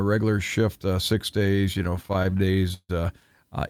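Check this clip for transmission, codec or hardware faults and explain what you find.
One transmission fault is present: repeated stalls (stutter) from 1.39 s to 2.91 s, just after "regular shift uh six". Packets arrived late or slower than playback, so the jitter buffer drained 23 times across that span. Each time the receiver extended the last sound until data resumed, fading it during longer waits. These fills total 395 ms, with the longest at 153 ms, covering about a quarter of the span. Nothing is lost, but the speech drags and stutters.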